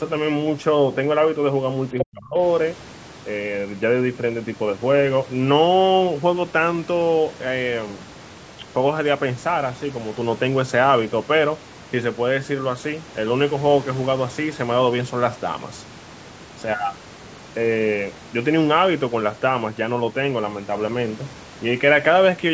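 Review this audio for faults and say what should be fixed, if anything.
Speech suppressed in double talk, 1.94 to 2.36 s: the talker's level falls steeply, nearly to silence, likely because the echo canceller confused overlapping speech with echo and attenuated both.

Other side's voice leaking through, 1.99 to 2.03 s: a brief scrap of the far-end voice, only slightly quieter than the talker, likely loudspeaker echo the canceller failed to subtract.

To prevent both, improve the echo canceller's double-talk detection and adaptation, or use a headset so the far end never reaches the microphone.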